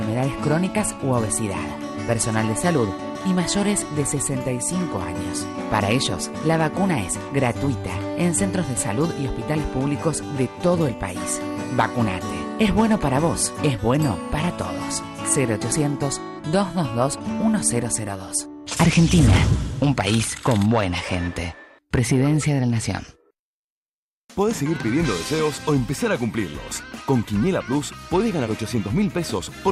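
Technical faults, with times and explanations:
15.72 s, dropped buffer (overrun): the audio was likely not read out before the hardware overwrote it, so roughly 20 ms went missing and the two sides were spliced straight together. There is no gap, only a sudden small jump forward in the sound.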